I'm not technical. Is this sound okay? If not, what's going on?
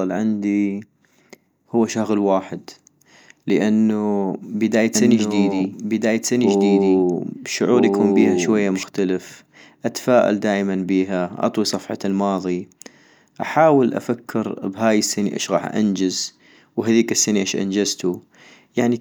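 No. From about 4.95 to 8.83 s, just after "لانو بداية", the speech is heard twice at once, with an equally loud second copy trailing about one and a half seconds behind, starting and stopping abruptly. This doubled audio track likely comes from the sound being recorded twice through a slower second path.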